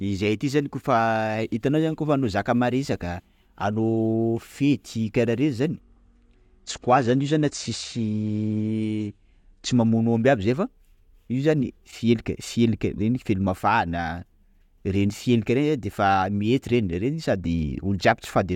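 An adaptive stream at a lower bitrate runs from 5.81 s to 9.81 s. The connection apparently slowed, so the player switched to a lighter encoding of the same speech without any gap, then switched back. Across those four seconds the treble vanishes above about 9.8 kHz, the sound turns duller and more processed, and codec artefacts grow. That fits a drop from roughly 96 to 32 kbit/s AAC. The change in quality is abrupt at both edges.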